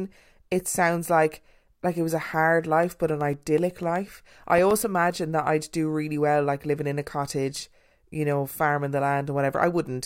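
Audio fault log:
2.83–4.83 s, periodic USB or driver dropouts: after "it was a hard" and before "imagine that i'd do", around fifteen ticks recur every 0.125 s. A blocked bus or driver drops about a millisecond of samples each time, and the brief silent gaps click against the speech.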